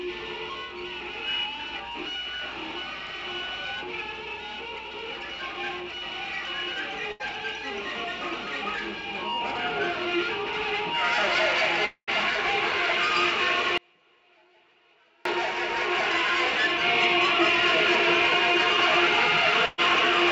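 Audio carried over a call link, with energy cut off sharply at 8 kHz on a spectrogram, which fits a G.722 wideband codec at around 64 kbps, shows two bursts of packet loss. One is at 7.12 to 7.22 s, losing about 80 ms, and one is at 19.66 to 19.80 s, losing about 120 ms. In each, the receiver's concealment repeats the last sound as a short held buzz or hiss that decays. The waveform shows a brief smooth, fading stretch before the signal resumes slightly ahead. From 11.86 to 12.09 s, roughly 220 ms are gone. The concealed tail fades into about 80 ms of flat silence before the audio jumps back, visible as a blank vertical band on the spectrogram, likely a long network dropout. From 13.78 to 15.25 s the sound cuts off abruptly for about 1.5 s, leaving only a faint residue roughly 35 dB below normal level before snapping back. This shows as a sharply edged near-empty block in both waveform and spectrogram, likely an audio dropout to a faint residue.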